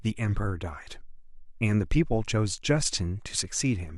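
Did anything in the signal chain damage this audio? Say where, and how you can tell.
No, nothing in this speech recording points to damage at any stage of the chain. Listening closely turns up no event or artefact that would place a problem in any link between capture and playback.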